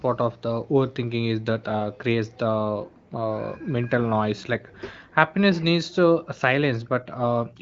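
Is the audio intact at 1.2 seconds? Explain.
Yes, at 1.2 seconds the speech is intact, carried cleanly by the AMR wideband (HD Voice) codec at its 18.25 kbit/s rate with no fault at that moment.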